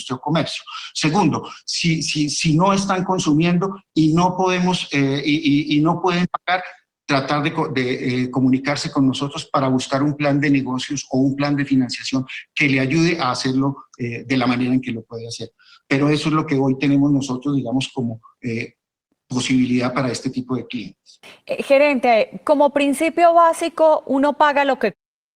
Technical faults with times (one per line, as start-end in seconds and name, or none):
none